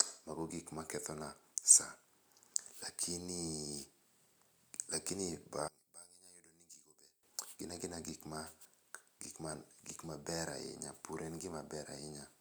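From 5.68 to 7.23 s the speech collapses by about 19 dB into a faint residue, likely one channel inverted, so the centred voice cancels when summed to mono. Unlike a plain gain drop, what remains is only the small mismatch between the channels.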